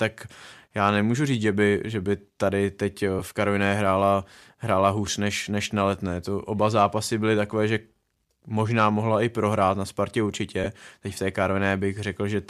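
At 3.19 to 3.22 s and 10.64 to 10.67 s, lost LE Audio frames let the decoder repeat the last spectrum with scrambled phase. The result is a brief noisy smear of about 10 ms, then 20 ms, consistent with one and then two frames of the likely LC3 stream. On a spectrogram each shows as a thin vertical smudge that breaks the harmonic lines.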